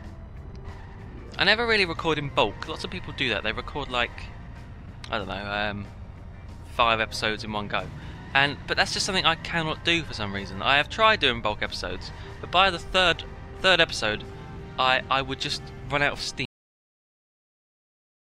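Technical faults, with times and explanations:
16.45–18.23 s, cut-off end: the final buffers were never written or played, so the audio halts abruptly at 16.45 s in the middle of a sound, with no natural decay, leaving about 1.8 s of flat digital silence instead of a fading tail.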